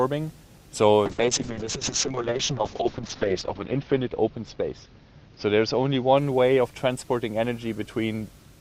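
From 1.06 s to 6.23 s a call bitrate drop degrades the audio. The connection's bandwidth estimate fell and the encoder switched to coarse coding, which fits a fall from around 64 kbps to about 6 kbps. The audible bandwidth narrows from 20 kHz to 8 kHz, so the top end disappears and the sound turns muffled, rough and watery. The worst stretch lasts about 2.36 s before quality climbs back.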